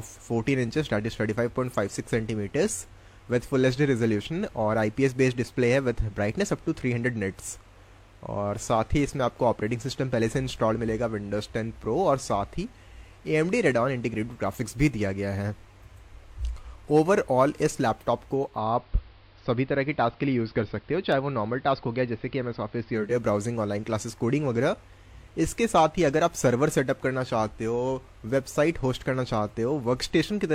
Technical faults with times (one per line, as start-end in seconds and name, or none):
18.30-23.24 digital radio blending to analogue